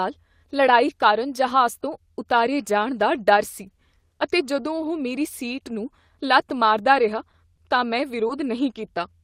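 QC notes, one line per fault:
6.93–6.95 s, 8.29–8.31 s, 8.43–8.45 s and 8.97–8.99 s: lost packet rebuilt from error correction. Each is a 20 ms patch where the packet went missing but the next one carried a low-bitrate backup copy, so the decoder played that instead. There's no gap, just a brief rougher, noisier grain in the speech, because the backup holds far less detail than the real frame did.
7.31–7.35 s, 7.55–7.59 s and 8.27–8.31 s: short concealed packet loss. Here 20 ms never arrived in time and had no backup, so the receiver bridged the hole by carrying the last bit of sound forward, following its pitch or as shaped noise, then crossfading back into real audio. You get a quick smear or wobble at each spot. The last one runs straight into the rebuilt patch at 8.29 s.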